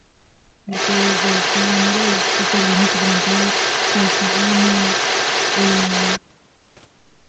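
From 0.03 to 0.71 s the speech drops sharply, by roughly 40 dB at its deepest, and comes through in broken, dulled fragments. This is speech suppressed in double talk, likely an echo canceller that could not tell the local talker from loudspeaker echo and turned both down.

From 0.71 to 6.2 s the other side's voice is leaking through. A second voice sits underneath at roughly the same level as the speech, and likely comes from loudspeaker playback that the echo canceller failed to remove from the microphone signal.

At 6.2 s the double-talk suppression returns and lasts to the end, again pulling the speech down by around 40 dB. The drops have the same gated, chopped quality, which likely reflects the canceller muting the near-end talker while both sides overlap.

Between 6.56 and 6.76 s, 200 ms of background is replaced by comfort noise. The room sound turns into a smooth, featureless hiss about 1 dB quieter than before, likely synthetic fill from Opus discontinuous transmission while the sender paused.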